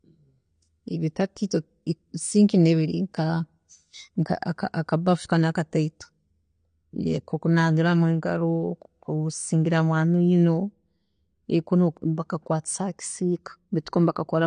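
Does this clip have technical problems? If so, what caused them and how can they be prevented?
Yes. AAC compression, present throughout the speech, is plainly audible: nothing survives above 9.7 kHz, leaving the sound dull, with a smeared, fizzy edge on sibilants. That points to a low bitrate around 32 kbps, likely from AAC-LC, which trims the upper band and coarsely quantises what remains. Encoding at a higher bitrate, or keeping a lossless master, would prevent it.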